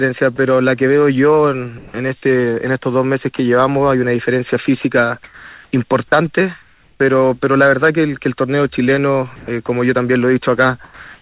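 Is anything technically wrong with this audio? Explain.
Yes. Sound dropped by the voice detector occurs at 0.36 s, 1.78 to 1.94 s, 3.36 s and from 10.84 s to the end. Each time the sound briefly gives way to steady noise or near silence, likely because the sender's detector mistook quiet material for background and the receiver filled in comfort noise. These are single clean gaps, not repeated switching.

Sound chopped by the voice detector occurs from 4.66 to 7.0 s and from 9.36 to 9.68 s. Here the detector likely toggled repeatedly, so about 0.94 s and 0.14 s of sound respectively become comfort noise in pieces. The result is choppy rather than one clean dropout. Throughout, the audio stops near 4 kHz, which fits a G.711 call path.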